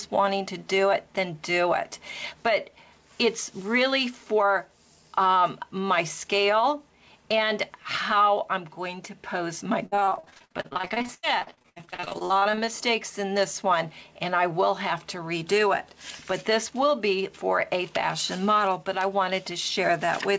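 From 9.86 to 12.69 s, repeated packet loss (robotic sound) sets in: about fifty short holes, the longest 84 ms, are patched by stretching the preceding sound, filling 43% of the span. Unlike a single dropout, the chopping recurs continuously, giving a robotic stutter within a band ending at 8 kHz that fits G.722.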